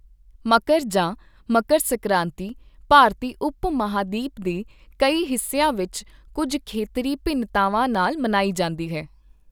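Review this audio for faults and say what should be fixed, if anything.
The audio path likely twice failed to deliver a block of samples in time, so the output was filled with zeros: a block of digital silence at 2.49 s, just before "ਭਾਰਤੀ ਉਪ", and again at 7.95 s, right after "ਵਿੱਚ ਕੁੱਝ ਖੇਤਰੀ ਭਿੰਨਤਾਵਾਂ". Each gap lasts about 1.33 ms, which fits a 64-sample block. That is too short to hear as a hole in the speech. Instead the waveform drops abruptly to silence and jumps back with no fade, and each event comes through as a tick or dip. To prevent it, give the processing more headroom or a larger buffer so every block is ready before its deadline.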